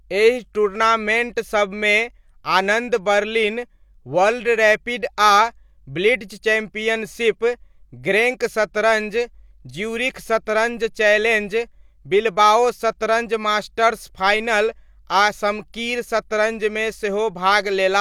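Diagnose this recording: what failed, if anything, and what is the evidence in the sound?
Nothing stood out on listening to this speech recording that would point to a failure anywhere in the chain.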